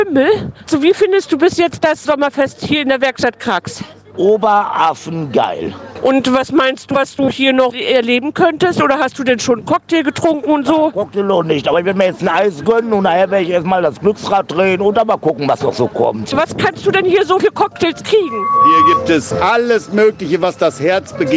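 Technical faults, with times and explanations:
Throughout, gain pumping: the level keeps swinging around 10 dB, so loud and quiet parts get squashed together. The likely cause is input gain set far too high, with a fast limiter clamping it down each time.
18.22 to 19.05 s, loudspeaker feedback squeal: a single 1.1 kHz tone grows over about half a second until it sits around 5 dB above the sound. The mic is picking up its own loudspeaker, and at that frequency the loop gain tops one.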